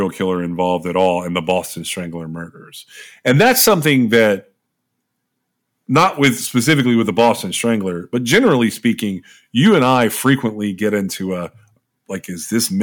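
Brief crackles on peaks at 0.99 to 1.09 s and at 1.5 s, then a harsher fuzz over longer stretches: 3.27 to 4.30 s, 5.96 to 6.80 s just before "with the", 7.19 to 7.31 s just after it, 8.33 to 8.53 s, and 9.65 to 10.34 s before "get into a". This is hard clipping. The speech peaks overrun what the chain can pass, by about 2 dB early and about 4 to 6 dB later, so they are sliced flat and throw off high harmonics.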